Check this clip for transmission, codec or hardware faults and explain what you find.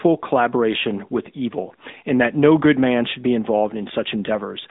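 One fault runs through the whole clip: the AMR narrowband mobile codec. The speech is held to a phone band of 150 Hz to 3.7 kHz. Nothing passes above 3.8 kHz. The codec rebuilds the voice from a vocal-tract model driven by sparse pulses. The damage is plainly audible as a buzzy, synthetic edge, which fits the 10.2 kbps mode.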